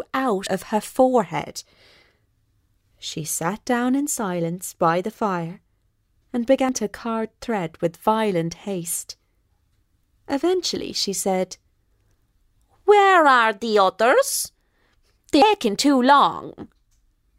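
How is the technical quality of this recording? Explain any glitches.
The recording has three audible glitches, all of the same kind. At 0.46 s, 6.69 s and 15.42 s the sound jumps ahead with no gap. The first two skips lose about a tenth of a second each, and the last loses nearly a third. The likely cause is a dropped buffer (overrun): audio wasn't collected before being overwritten, so the surrounding pieces were spliced together directly.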